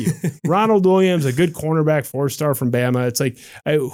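Nothing in this speech recording stands out as a technical fault.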